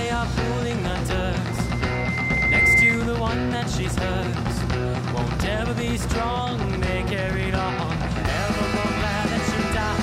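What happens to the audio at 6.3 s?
Nothing goes wrong at 6.3 s; the audio plays through that moment intact, with no dropout, click or distortion.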